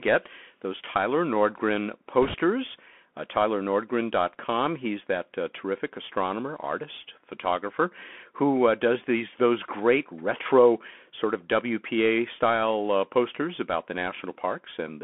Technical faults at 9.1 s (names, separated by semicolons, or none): Bluetooth CVSD headset codec